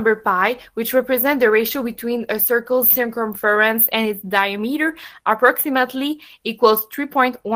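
Speech recording; no technical faults found.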